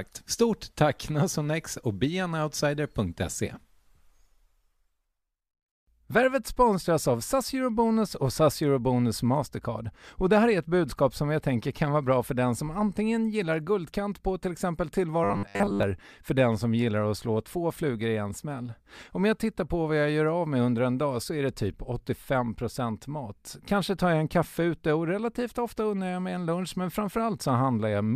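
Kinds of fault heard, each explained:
Robotic sound from repeated short buffers: from 15.24 to 15.83 s, right after "guldkant på till exempel" and before "för den som gillar", the speech collapses into a stiff metallic buzz at 100 Hz. That pitch fits a roughly 10 ms chunk being replayed over and over for most of that stretch, likely because fresh audio wasn't arriving fast enough, so the real signal underneath gets skipped while the buzz loosely tracks the words.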